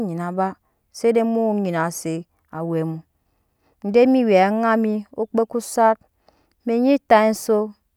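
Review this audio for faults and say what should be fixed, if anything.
Nothing in this speech recording needs fixing. No faults can be heard anywhere in it.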